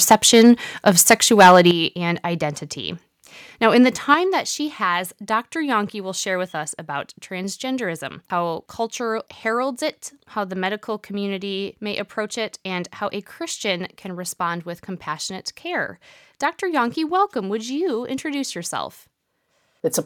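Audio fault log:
0.11 to 0.5 s and 0.88 to 1.71 s, microphone overload: the loudest peaks get flat-topped, running about 7 and then about 8 dB past full scale, with a few percent of samples clipped. That's what gives those stretches the harsh, crackly edge, likely from the input gain being set too hot.
0.13 s, 1.71 s and 4.14 s, microphone volume stepped down: the whole level, background included, drops suddenly by about 3, 9 and 6 dB. The 1.71 s step lands right as the second overload ends, which looks like the software likely reacting to the clipping by cutting input gain.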